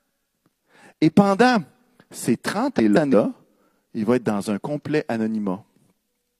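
Just after "pendant ces", from 2.76 to 3.14 s, the speech falls into a brief garbled flutter: frames out of order. Two adjacent blocks of about 171 ms each, which fits runs of four frames, were decoded in swapped order, so the later half plays before the earlier one. Unlike a dropout or skip, nothing goes missing and the timing afterwards stays intact; the material is only rearranged.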